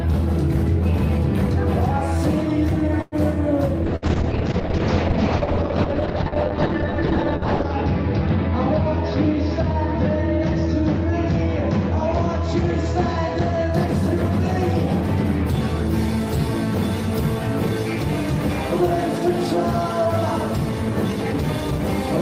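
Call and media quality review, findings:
Call audio freeze, 3.01 to 3.15 s. Last sound stretched into a fading buzz or hiss, then resumes intact. Likely a jitter buffer underrun from delayed packets, adding about 105 ms delay.

Call bitrate drop, 3.90 to 13.77 s. Audio turns muffled and rough. Encoder cut from 40 to 7 kbps, band limit falling from 20 kHz to 6 kHz, lowest for 3.9 s.

Burst of packet loss, 3.96 to 4.05 s. Brief concealment buzz or hiss, then a jump forward. Roughly 60 ms lost or late, filled by the receiver, that portion gone.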